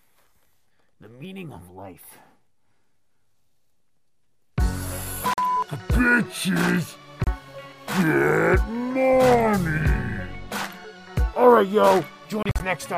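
At 5.34 s the sound cuts out for about 44 ms, at 7.24 s for about 29 ms, and from 12.43 to 12.60 s it stutters through several gaps of up to 44 ms. The audio resumes further along each time, pointing to a likely Bluetooth dropout.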